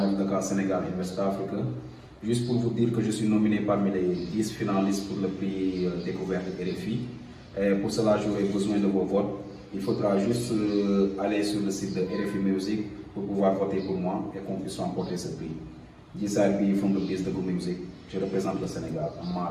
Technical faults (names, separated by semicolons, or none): none